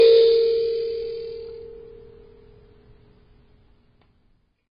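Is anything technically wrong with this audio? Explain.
Yes. Throughout the music, nothing is heard above 5.1 kHz, and the sound is dull and smeared. The likely cause is heavy AAC compression at a very low bitrate, around 16 kbps. The encoder drops the upper bands and coarsely quantises the rest, leaving a warbling, fizzy texture.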